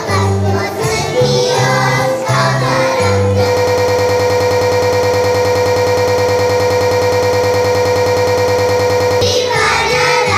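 From 3.57 s to 9.22 s the audio turns into a broken-record loop: a fragment of about 105 ms repeats exactly and back to back, 54 times over more than five seconds, giving a rapid, mechanical stutter at close to ten cycles per second. The likely cause is a player, encoder or stream that stalled and kept resending the last fragment it held. Whatever should have played during that span is missing.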